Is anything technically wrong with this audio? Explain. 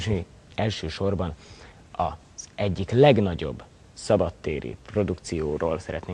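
No, nothing is technically wrong with this audio.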